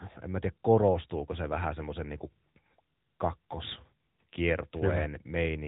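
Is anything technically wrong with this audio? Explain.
Yes. Throughout the speech, the AMR narrowband mobile codec leaves plainly audible damage. Its vocal-tract model rebuilds each 5 ms from a few pulses, which gives a buzzy, synthetic edge that fits a mode near 10 kbps. A spectrogram shows nothing above 3.8 kHz.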